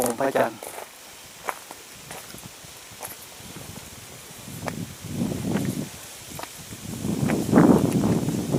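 Channel delay (doubling) runs from 0.0 to 1.0 s: one channel arrives 40 ms late, and when both are folded to mono the late copy stands apart at equal level, so every onset sounds doubled, like a tight slap echo trailing the original.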